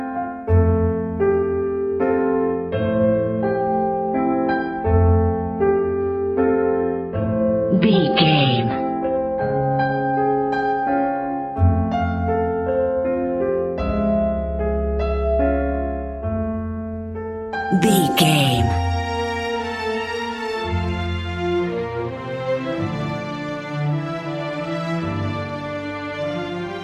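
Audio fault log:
2.5 to 10.5 s, adaptive stream at a lower bitrate. The sound abruptly turns thinner and duller with no gap, then returns to full quality just as suddenly. Nothing remains above 5.1 kHz in this stretch. Codec artefacts rise, giving a smeared, watery texture. A slowed connection makes the player switch to a leaner encoding of the same stream. The change points to AAC dropping from around 96 kbit/s to around 16 kbit/s.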